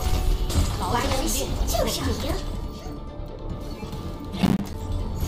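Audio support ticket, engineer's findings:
Processor overload crackle, 4.42–4.74 s: gritty crackle burst from repeated missed deadlines on roughly 10 ms buffers, each miss dropping a short silent gap with hard edges.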